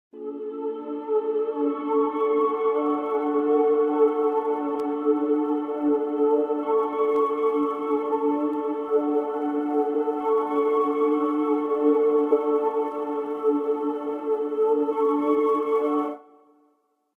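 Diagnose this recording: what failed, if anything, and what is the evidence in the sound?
Two brief glitches break into the sound, one at 12.31 s and another from 14.91 to 14.93 s, each a momentary disruption. This is damaged data in a compressed stream, a fault at the codec stage. Bytes in the encoded file or stream were corrupted, so the decoder misread the affected frames, lost frame sync and searched forward for the next valid header, producing these short glitches.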